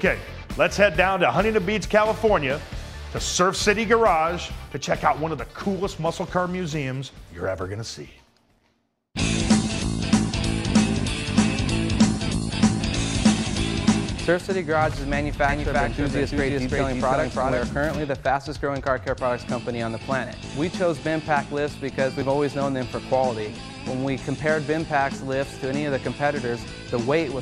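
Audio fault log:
15.49–17.71 s doubled audio track: an equally loud copy trails around 300 ms behind, cutting in and out abruptly with no decay, unlike echo; likely a second capture path.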